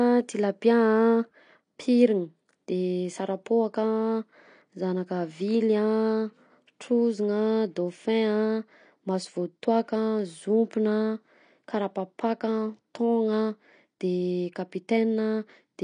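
Throughout the speech, nothing sounds above about 9.9 kHz, and sibilants turn fizzy and smeared, which fits AAC compression at a low bitrate near 32 kbps. Unlike a simple low-pass filter, the likely codec also leaves a warbling, holey texture inside the remaining band.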